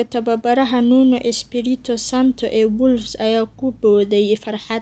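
No technical faults can be heard anywhere in this speech. The sound has the band-limited character of a call, with nothing above about 8 kHz, which fits a call codec working as intended.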